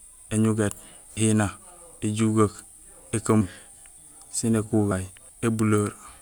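At 1.17 s and again at 4.91 s the speech jumps forward: compressed frames skipped, roughly 200 ms then about 70 ms lost, whole multiples of a 32 ms frame. Each join is a sudden break, shown as a brief vertical mark where the spectrogram's harmonics break.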